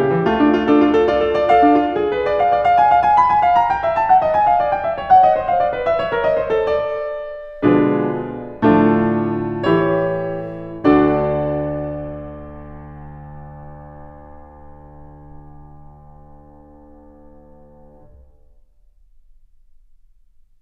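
Nothing in this music recording points to a technical fault: the signal holds steady throughout, with no dropouts, clipping, glitches or other disturbances to be heard.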